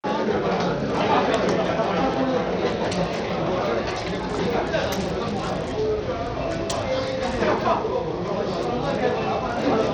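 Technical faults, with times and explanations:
Throughout, Bluetooth SBC compression: the top of the spectrum keeps dropping out and flickering back, and a gritty, grainy noise with aliasing rides on the sound. That pattern likely comes from SBC coding at a starved bit pool, in keeping with roughly 80 kbps, where the weak upper sub-bands lose their bits and the rest are coarsely quantised. Unlike a fixed low-pass, the treble comes and goes, and there is grit rather than the warbling swirl of perceptual codecs.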